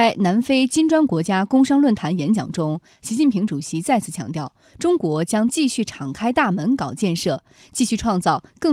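At 6.03 s the speech turns briefly rough and noisy for about 20 ms. This is a lost packet rebuilt from error correction. The next packet carried a low-bitrate copy, and the decoder played it instead. There is no gap. The duration fits a single lost packet.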